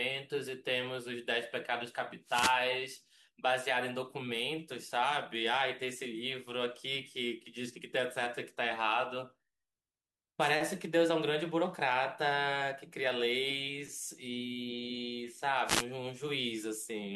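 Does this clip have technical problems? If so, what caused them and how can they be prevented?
Yes. Wireless microphone noise hits occur at 2.25 to 2.59 s, 10.40 to 10.51 s and 15.65 to 15.85 s, each a brief swish of static. Reflected radio waves cancel the direct FM signal, so receiver noise rises. Line-of-sight antennas with diversity reception prevent this.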